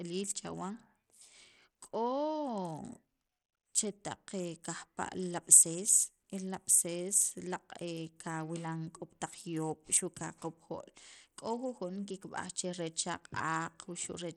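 A speech recording that sounds gritty and dull throughout, with treble flickering in and out, likely from Bluetooth SBC compression starved of bits, consistent with roughly 80 kbps. A spectrogram would show patchy, blinking upper bands and grainy noise.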